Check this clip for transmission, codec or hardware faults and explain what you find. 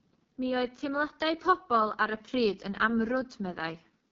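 The speech carries one fault throughout: the AMR wideband (HD Voice) codec at heavy damage. The coder models the vocal tract and excites it with sparse pulses. Its harsh, raspy roughness fits the lowest mode, 6.6 kbit/s. A spectrogram shows nothing above 7.4 kHz, smeared harmonics, and a noisy top band filling the gap up to 7 kHz.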